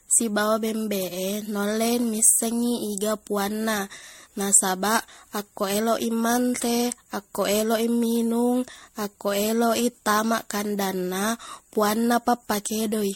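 Generation loss runs throughout the speech, which sounds swirly, hollow and smeared, with blurred attacks and nothing above 16.6 kHz. This is likely MP3 re-encoded around five times at a rate that fits 64 kbit/s, each pass requantising on a shifted frame grid so artefacts accumulate.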